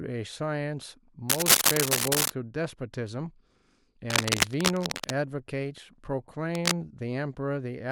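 From 1.29 to 2.30 s, a burst of cable scratch noise rides over the speech. It is dense and uneven, like scratching or rustling, and somewhat louder than the speech itself. It returns from 4.1 to 5.12 s, this time at roughly the same level as the speech. A shorter burst follows at 6.55 to 6.77 s, again about as loud. The likely cause is a worn cable or connector being moved, so its contact resistance jumps about rapidly.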